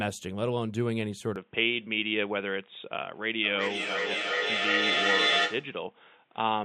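At 1.36 s the speech suddenly goes dull and boxy and stays that way to the end. The band narrows, and a faint new noise floor appears about 40 dB under the speech. There's no gap at the changeover and the level barely shifts. The most likely cause is the input switching to a poorer device, such as a second mic or a headset dropping into its call profile.

From 3.43 s to 5.81 s there's a feedback echo between two devices. One device in the room plays the call audio, the other's mic picks it back up, and neither echo canceller can remove sound it didn't play itself. The speech comes round again roughly every 400 ms, thin and ringy. The loop is hot enough that the repeats build instead of fading, peaking about 4 dB louder than the speech itself.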